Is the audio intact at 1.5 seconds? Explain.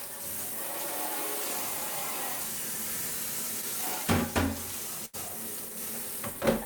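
Yes, the audio is intact at 1.5 seconds, with no dropout, click, distortion or other fault at that point.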